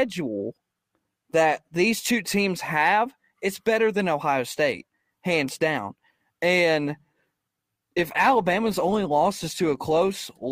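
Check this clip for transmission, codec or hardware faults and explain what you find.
One fault, in the closing stretch of this speech clip. Adaptive stream at a lower bitrate, 7.70 s to 10.51 s: the player switched abruptly to a leaner encoding, no gap, because throughput dropped. Codec artefacts thicken, consistent with a step from roughly 64 to 24 kbit/s Opus.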